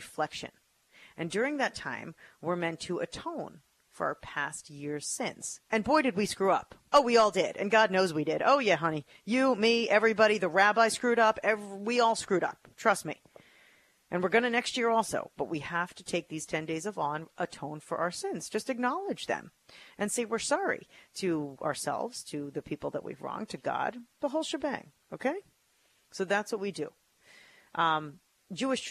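No technical faults are audible anywhere in the recording.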